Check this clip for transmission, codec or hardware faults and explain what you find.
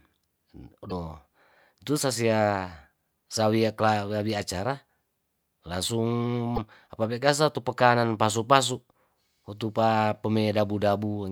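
Two short bursts of damaged data in a compressed stream break up the speech, at 0.88–0.92 s and 6.54–6.58 s, the second just before "apabe kasa itu pekanan". Corrupted bytes make the decoder misread frames and lose sync, giving a brief glitch in the speech.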